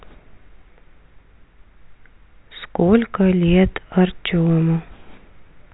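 No technical faults can be heard in this speech. The G.711 telephone coding path is audible as a band limit, with nothing above about 3.9 kHz and only faint, level-following quantisation noise beneath the speech.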